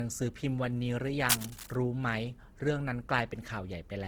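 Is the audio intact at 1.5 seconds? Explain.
No. From 1.28 to 1.76 s there is cable scratch noise: dense, uneven bursts of rustling and scratching about as loud as the speech itself, the sound of contact resistance in a cable, connector or control fluctuating rapidly, likely from a worn part being moved.

Underneath, the whole clip, including this moment, carries the artefacts of a heavily compressed encode inside what is now a high-bitrate MP3. This is likely low-bitrate audio saved at a high bitrate: the damage from a very low-rate earlier pass remains, and re-encoding cannot restore it.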